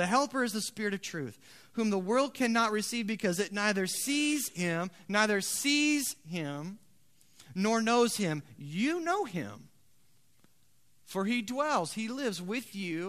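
Speech recording, with nothing technically wrong with it.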